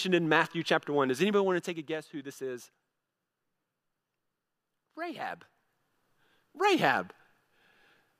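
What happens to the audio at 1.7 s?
A gain change is being applied in coarse, unsmoothed steps here, so the speech at 1.7 s is caught in zipper noise running from 1.40 to 2.04 s. The level drops by roughly 10 dB in 2 dB jumps, about ten per second, and each abrupt jump puts a small click into the waveform. The result is a fast ticking, zipping texture riding on the speech while its loudness falls.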